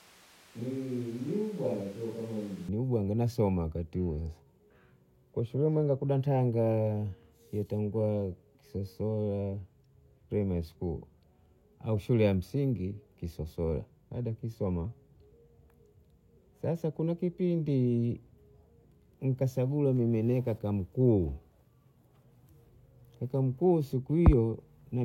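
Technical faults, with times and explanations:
0.00 to 2.69 s, switch to a distant microphone: from the very start the speech sounds roomy and hollow, thin in the bass, roughly 5 dB quieter, with background noise sitting only about 25 dB below the speech. It snaps back to a close, full sound just before "ubwanga nasoma wakati huo". The likely cause is that the opening was captured by a microphone further from the speaker, picking up more reflections and ambience than direct sound.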